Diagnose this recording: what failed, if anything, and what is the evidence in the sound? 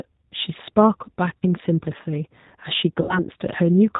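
The codec stage shows plain damage for the whole of the speech clip. Nothing reaches above 4 kHz, and the voice has the rough, slightly synthetic texture of G.729, which fits the 8 kbit/s G.729A variant. That codec keeps only a vocal tract filter, a pitch predictor and a handful of pulses per 10 ms frame. Fine spectral detail and natural excitation are lost, so the result is intelligible but coarse.

Network packet loss, concealed by the speech codec, causes two dropouts. The first runs from 1.38 to 1.43 s and covers about 40 ms of missing audio, which fits two lost 20 ms packets. The second runs from 3.01 to 3.20 s and covers about 80 ms. At each gap the sound smears into a buzzy tone or coloured noise that fades as the decoder repeats its last pitch and filter at falling gain. Because each frame builds on the previous one, the voice stays weak or distorted after the packets resume.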